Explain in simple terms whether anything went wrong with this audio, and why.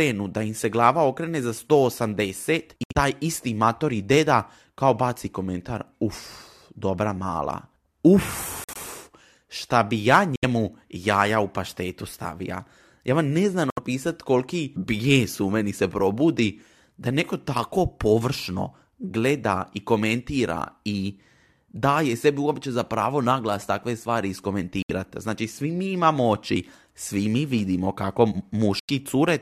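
Corrupt frame muted. Damaged pieces of the speech data were thrown out and replaced with silence. Brief, sudden gaps occur at 2.84, 8.64, 10.36, 13.70, 24.82 and 28.79 s.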